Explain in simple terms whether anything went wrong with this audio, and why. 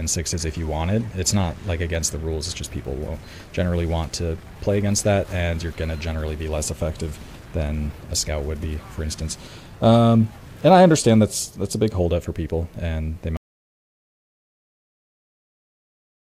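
Something went wrong near the end. At 13.37 s the input signal was most likely lost, through a disconnected device, a failed link or an accidental mute, while the recording carried on writing nothing but silence. This is an audio dropout to silence. The sound stops abruptly mid-flow and never returns, leaving total silence, without even background hiss, for the last three seconds or so. Whatever happened during that stretch simply isn't there.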